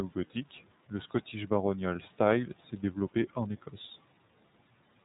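From start to finish the speech runs through the iLBC codec, and the damage is easy to hear. Nothing above about 3.8 kHz survives, so the top end is dull and narrowband. Each frame's excitation is coded on its own, without help from the previous frame, which gives the speech a slightly rough, synthetic grain. The texture fits iLBC's 30 ms frame mode at roughly 13 kbps.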